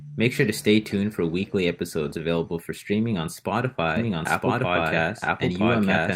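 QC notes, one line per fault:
2.05–2.19 s, lost packet rebuilt from error correction: after "stay tuned for weekly", 80 ms of lost audio was rebuilt from a low-bitrate copy, so there is no gap but it sounds rougher, with a grainier, noisier patch on the spectrogram before "for streaming on".
3.97 s to end, doubled audio track: a second copy enters abruptly at about the same level, trailing by roughly one second, likely from a slower duplicate capture path. The spectrogram shows the same patterns repeated about a second later, with no decay tail.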